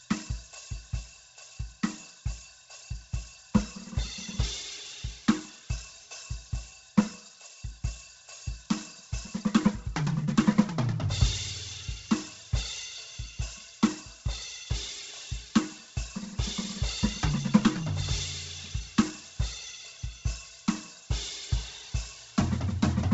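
From start to finish the music has nothing above 7.8 kHz, and the upper band that remains sounds grainy and breathy, likely from Bluetooth LC3 compression run hard, as a rate near 16 kbps would. Unlike a clean low-pass, the top octave fizzes with substituted noise rather than simply dulling.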